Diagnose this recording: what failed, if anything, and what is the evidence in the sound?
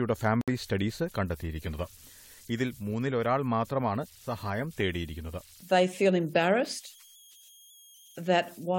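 Converter idle tones run through the whole recording: a faint whistle around 3 kHz sits in the pauses between speech, and a grainy texture rides under the quieter passages, about 28 dB below the signal. This is a converter-stage failure. A delta-sigma converter running without dither settles into repeating bit patterns whenever its input is small, and those cycles produce a steady tone whose pitch is set by the input's DC offset.

Corrupt frame muted at 0.41 to 0.49 s: the speech drops abruptly into a clean hole of about 78 ms, then resumes with no shift in timing. This is a codec and decoder fault. Flipped bits made the decoder reject the compressed frames, and the player substituted silence for them. The gap's length points to about three consecutive frames of roughly 26 ms each, which fits a frame-based speech or audio codec.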